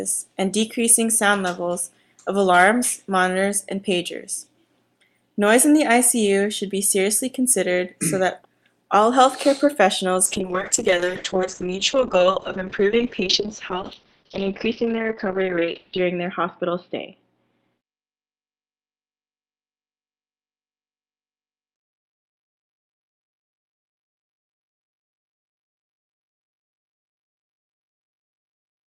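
From 10.26 s to 26.93 s there is a call bitrate drop: the encoder was starved of bits, so it coded more coarsely and cut the bandwidth from about 20 kHz to 6 kHz. The sound turns muffled and rough, with a watery smear, worst for about 5.7 s at the bottom, which points to a rate near 7 kbps. Unlike a simple low-pass filter, the coarseness comes along with the dulling, and both ease as the bitrate recovers.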